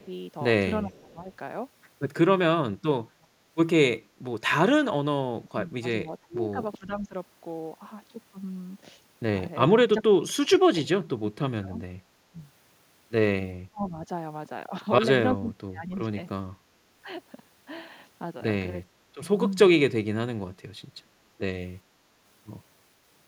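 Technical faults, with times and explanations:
0.00–0.05, 0.84–1.29, 3.11–3.44, 5.31–7.14, 9.76–12.38, 13.70–13.96, 15.37–16.48 and 18.94–19.20 s: speech suppressed in double talk. The speech dips or chops out in pieces, by about 10 dB at the start and up to about 35 dB around 15–16 s. That's likely an echo canceller hearing both ends talking at once, mistaking this talker for loudspeaker echo, and ducking everything.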